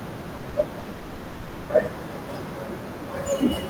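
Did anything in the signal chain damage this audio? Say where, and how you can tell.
Yes. The damage happened on the network. There are three bursts of packet loss, at 0.37 to 0.46 s, 0.49 to 0.58 s and 0.79 to 0.88 s. Each time, consecutive packets failed to arrive in time, and the receiver filled the hole by extending the last speech it had, fading it down over about 60 ms. You hear a brief held buzz or hiss, and then the speech picks up further along, with about 60 ms of the original skipped.

A longer break runs from 0.91 to 1.72 s, most likely a long network dropout in which no audio reached the receiver for most of a second. The receiver keeps stretching and fading the last sound across the whole stretch, about 780 ms, without ever falling to true silence. When the speech returns, everything that should have filled that span is simply gone.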